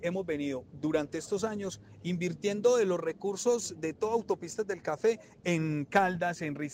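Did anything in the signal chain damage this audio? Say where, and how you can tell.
Yes, at the converter: sample clock jitter runs through the whole clip as a hiss-like roughness that tracks loud, bright passages and drops away in quiet. The unstable clock, wandering a few microseconds, mistimes samples on steep slopes, leaving error roughly 35 dB down.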